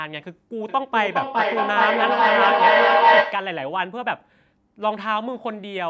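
Speech clip with a feedback echo between two devices from 0.69 to 3.63 s: sound recirculates roughly every 0.4 s, repeats building to about 8 dB above the speech instead of decaying. The call microphone processing limits content to 8 kHz.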